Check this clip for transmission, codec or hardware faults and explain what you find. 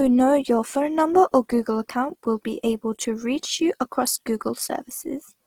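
One fault runs through the whole speech clip: Opus compression. From start to finish the voice has a rough, grainy texture, and the damage is plainly audible. The likely cause is the music-oriented CELT mode running short of bits, at a rate that fits around 16 kbps. It preserves each band's energy but fills starved bands with folded or noise-like content. That gives grit rather than swirl, while bandwidth stays full, extending to about 20.3 kHz.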